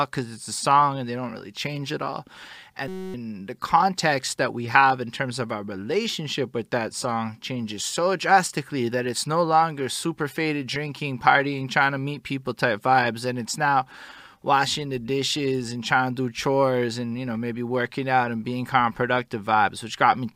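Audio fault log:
2.88–3.14 s, system hang loop: a 5.33 ms slice of speech repeats exactly, dozens of times, giving a steady 188 Hz buzz. The driver stalled while hardware kept replaying its ring buffer, which fits a 256-sample buffer. Roughly a third of a second is lost.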